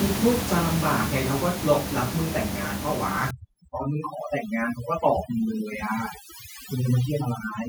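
From 0.05 to 1.61 s, automatic gain falling: the gain control judged the input too loud or its background too strong and eased down about 4 dB, so speech and room noise sink together, a tapering waveform envelope. From 3.31 s to the end, overdone noise removal strips bands near its noise estimate. The room noise, about 10 dB below speech, drops and breaks up into twinkling specks; the spectrogram shows scattered isolated dots and a gappy, thinned harmonic structure.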